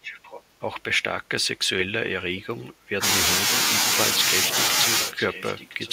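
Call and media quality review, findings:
Faint delayed copy of the speech, 0.02–0.43 s and 5.02 s to the end, lagging 1009 ms and roughly 15 dB down. Echo leak, likely from an incomplete far-end loudspeaker echo cancellation.

Speech dips sharply, around 40 dB at deepest, for about half a second at 2.52–3.04 s. Speech suppressed in double talk, likely the echo canceller attenuating both overlapping talkers.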